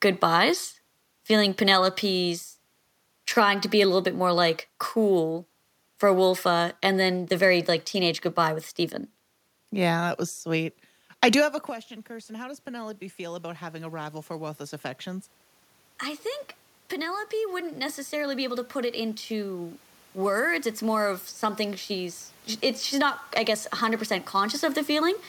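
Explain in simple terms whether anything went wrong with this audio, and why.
Around 11.5 seconds the talker moves away and the voice drops. From 10.52 to 22.23 seconds, automatic gain rising is heard: the level control slowly turns itself up to compensate, so the voice and the room noise behind it swell back together.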